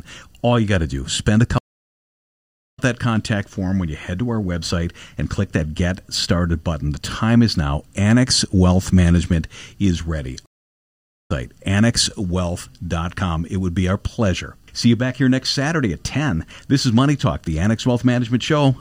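At 1.58 to 2.79 s, after "to do spend a", a stream reconnect leaves 1.17 s of silence, then "that contact form when" resumes about a second later in the stream. After "is ready", 10.46 to 11.31 s repeats this: 0.82 s of silence, then a jump of about half a second. Unlike a simple dropout, the restarted decoder skips material instead of picking up where it stopped.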